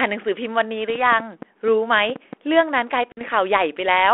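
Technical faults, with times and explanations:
3.12 to 3.21 s, packet loss on an ADPCM call: about 50 ms, a handful of packets, drops to hard-edged silence. The decoder's predictor and step size lose sync with the 32 kbit/s G.726 sender, so the sound comes back slightly distorted and settles within tens of milliseconds.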